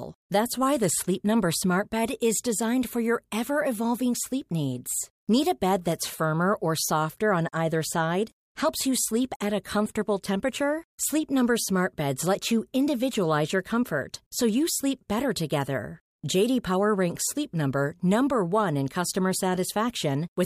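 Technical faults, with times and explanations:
No technical faults stood out on listening to this speech recording.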